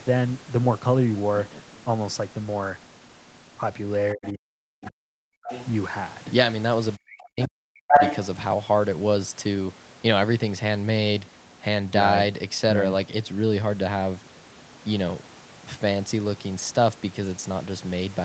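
From 4.14 to 5.49 s the speech is suppressed in double talk. It dips by up to about 40 dB, for roughly a second in total. Both sides likely talked at once, and the echo canceller turned everything down. The same happens from 6.97 to 7.95 s.

The other side's voice leaks through at 4.85 to 4.89 s and 5.48 to 5.66 s. It sits about 20 and 10 dB under the speech. It returns at 7.41 to 7.47 s, then at 7.90 to 8.16 s, about 10 dB louder than the speech. This is likely loudspeaker echo that the canceller left in the microphone signal.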